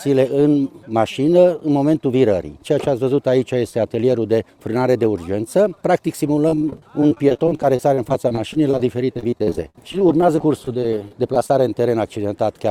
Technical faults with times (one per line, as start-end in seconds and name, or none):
6.48-11.50 repeated packet loss (robotic sound)